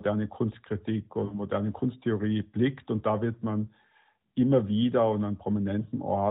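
A speech clip carried over the AMR narrowband mobile codec, so nothing above 4 kHz comes through. From 1.26 to 1.40 s there are lost AMR speech frames. The decoder reuses its last good settings with falling gain, so the sound drags and fades. The gap lasts about 60 ms, which fits three 20 ms frames.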